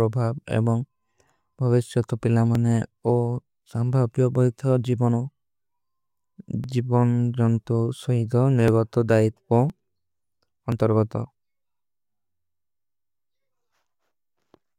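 Periodic USB or driver dropouts run from 0.51 s to 13.79 s, one every 1.02 s, about fifteen in all. Each time a blocked bus or driver skips a couple of milliseconds of speech, leaving a small, evenly spaced tick wherever sound is present.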